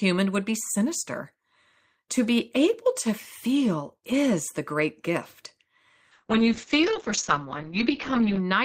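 After "is the great gift", at 6.13 s, a call bitrate drop hits. Coarser coding at what sounds like 8 kbps cuts the top above 8 kHz, leaving speech muffled and rough to the end.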